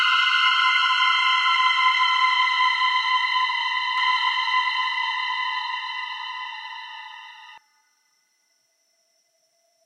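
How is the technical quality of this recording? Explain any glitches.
The recording has one clear fault, a doubled audio track, from 3.98 s to 7.58 s. Most likely, the sound was captured a second time through a slower path, or an edit left two out-of-step copies layered together. For those few seconds, a full-band copy trails the original by roughly one and a half seconds, about 5 dB quieter, with no decay or room colour. It cuts in and out abruptly at both ends.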